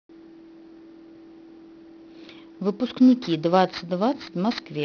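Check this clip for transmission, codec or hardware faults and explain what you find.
One fault is present, aliasing, running through the whole clip. The sound points to a drop from about 16 kHz to 11 kHz sampling with no anti-alias filter, so content above 5.5 kHz folds back down, adding gritty, metallic sibilance roughly 20 dB below the speech.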